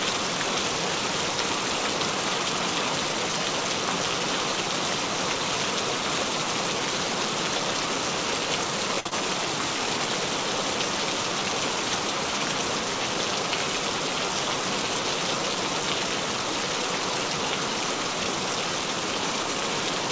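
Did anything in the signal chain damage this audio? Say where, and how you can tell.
Yes. From 9.00 to 9.07 s a sound is held too long with a slight buzz or dip, then resumes where it left off. That is a short stall from a late packet at the network and jitter-buffer stage: the buffer ran dry, and the receiver stretched the last sound for 54 ms, adding 54 ms of delay.

Right after it, from 9.07 to 9.13 s, there is a brief smear where detail seems to slip away. This is short concealed packet loss: 40 ms of audio never arrived, and the decoder papered over the gap with 37 ms of continued sound before blending back into the real signal.

From 13.07 to 13.32 s the audio sounds hurried, running at 113% of normal speed with no change in pitch. That is a jitter buffer speed-up in call processing: holding excess audio, the receiver trimmed short pitch-period slices, about 40 ms in all, to cut its delay. 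Through all of this the G.722 call path, with nothing above 8 kHz, sits underneath.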